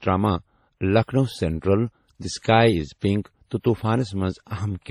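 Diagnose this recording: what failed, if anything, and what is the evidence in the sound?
Throughout the speech there are two kinds of coding damage at once: a smeared, swirly low-bitrate texture with a different graininess on top, and nothing above 17.2 kHz. This points to transcoding between lossy codecs at the codec stage, likely a 32 kbit/s MP3 re-encoded as 64 kbit/s WMA. The second encoder spends bits on the first one's artefacts and adds its own.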